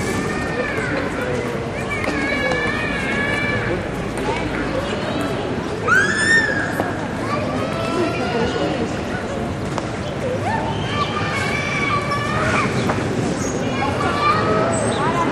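A recording of everyday sounds, with nothing technically wrong with it.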